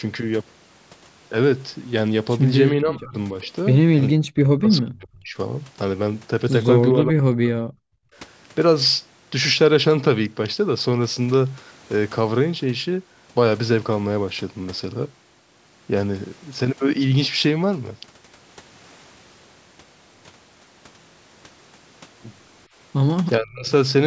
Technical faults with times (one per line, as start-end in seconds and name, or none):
2.76-3.14 speech suppressed in double talk
4.12-5.36 speech suppressed in double talk
6.93-7.95 speech suppressed in double talk
23.38-23.71 speech suppressed in double talk